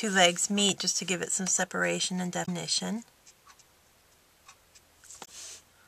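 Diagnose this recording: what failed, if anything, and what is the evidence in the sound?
Right at the start there's a loud pop, actually a double one, between 0.69 and 0.83 s, standing a good 10 dB or so above the sound, which carries straight on underneath. That points to the analogue side: a sudden voltage step, most likely from a plug going in, a switch or a static discharge, gets added to the signal, and the downstream circuitry shapes each step into a quick pop rather than a clean click.

The other problem is damaged data in a compressed stream, heard twice as short glitches: 2.42 to 2.49 s and again at 5.21 to 5.28 s. Both last about 70 ms. This lives in the codec or storage stage: some bytes in the encoded file got corrupted, so the decoder misreads a frame, loses sync, and jumps ahead to the next valid frame header, leaving a short glitch.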